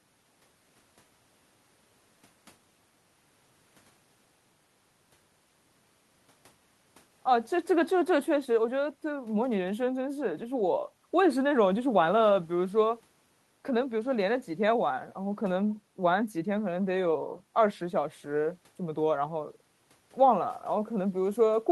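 No technical faults can be heard anywhere in the speech recording, and the signal stays continuous and steady throughout.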